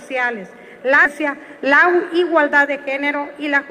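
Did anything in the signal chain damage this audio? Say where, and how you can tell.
Yes. At 1.05 s there is a skip ahead. Roughly 0.7 s of sound is simply gone, with no fill, and the material on either side is butted together. The waveform envelope changes abruptly there, and a spectrogram shows harmonic tracks cut off and restarting mismatched, with no silent gap.

From 1.15 s to 3.70 s a jitter buffer speed-up plays the sound at 108% of normal rate with the pitch unchanged. The receiver repeatedly cuts pitch-period-length slices to shed around 200 ms of backlog. A spectrogram keeps the same harmonic spacing while events arrive compressed in time, and the waveform shows small, regularly recurring seams.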